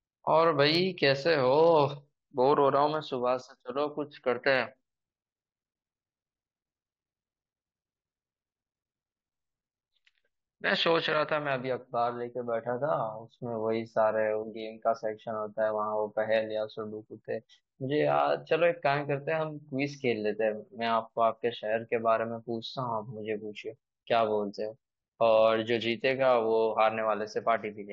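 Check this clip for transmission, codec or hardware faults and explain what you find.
No transmission, codec or hardware faults.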